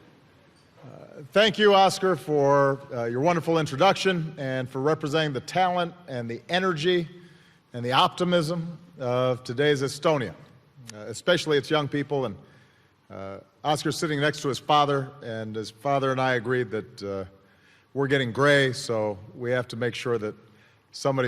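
No technical faults occur anywhere in the clip, so there are none to describe in time order.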